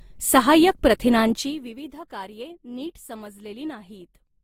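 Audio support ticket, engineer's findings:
Speech with coding artefacts throughout, two layers of coding artefacts heard together, nothing above 16.5 kHz. Likely transcoding between lossy codecs, fitting a low-rate Opus pass re-encoded to Vorbis.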